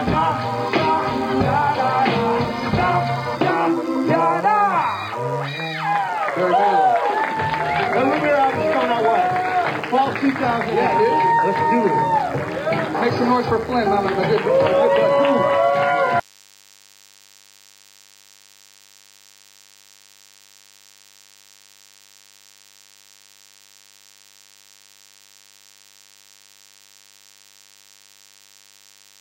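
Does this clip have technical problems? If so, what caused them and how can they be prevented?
Yes. A thin, steady buzz runs underneath the sound from start to finish, sitting well below the main signal, roughly 30 dB down, with a hard, harmonic-rich edge pitched at 100 Hz. This is DECT cordless phone buzz: a nearby DECT handset or base station transmits a radio burst every 10 ms, and the recording chain's audio circuitry rectifies those bursts into an audible pulse train at 100 Hz. Keep DECT phones and bases well away from microphones, preamps and cables during recording.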